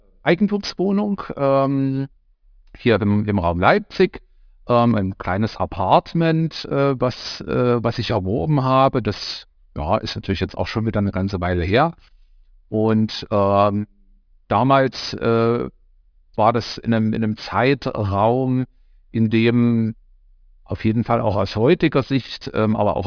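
It's a speech clip with aliasing running the whole way through: the highs stop dead at 5.5 kHz and fold back down as gritty, metallic junk, which fits a drop to an 11 kHz sample rate without filtering first, with the folded content only around 20 dB under the speech.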